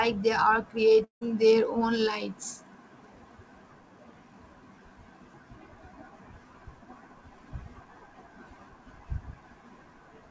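From 1.04 to 1.23 s the speech breaks off, likely a long network dropout. A fading buzz continues the last sound, then near-silence follows. About 180 ms never returns. Throughout, nothing above 8 kHz is heard, which fits the G.722 call codec.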